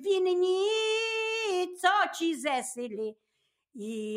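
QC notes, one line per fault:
3.14–3.54 s, sound cut by the noise suppressor: the suppressor mistook part of the sound for noise and pulled it down by up to about 19 dB, for around a fifth of a second in total. On the waveform the envelope dips; the spectrogram shows energy thinning across bands.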